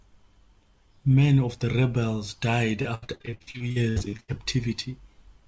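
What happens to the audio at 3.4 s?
At 3.4 s the sound sits inside a stretch of repeated packet loss (robotic sound) running from 2.82 to 4.30 s. Gaps up to 79 ms are patched by extending the previous sound, covering nearly half the span, so it turns choppy with pieces missing. A spectrogram shows smeared, repeated frames between abrupt breaks.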